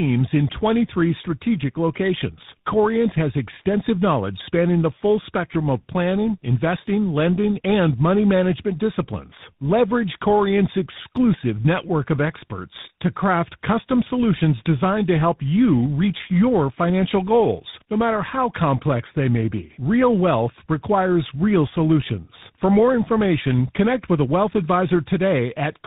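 Tandem speech coding runs through the whole clip. The speech was coded, decoded and coded again across network borders, apparently from a GSM full-rate leg through A-law transmission into G.726 at a rate that fits 32 kbit/s. That is two lossy speech coders in a row, the second working on the first's flaws. Nothing reaches above 3.8 kHz, so the speech sounds muffled, with a rough, warbling texture that stacks beyond what either coder adds alone.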